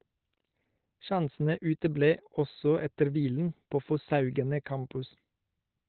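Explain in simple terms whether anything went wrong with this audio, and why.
Something did go wrong. From start to finish the speech sounds muffled and hoarse, like an old phone line, with nothing above 4.3 kHz. That's most likely Opus compression squeezed hard, dropping into its speech mode and cutting the top end to save space.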